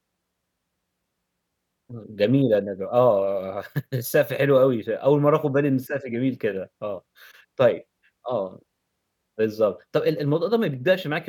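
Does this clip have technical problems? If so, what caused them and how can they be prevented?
No, this clip has no technical problems, so there is nothing that needs preventing.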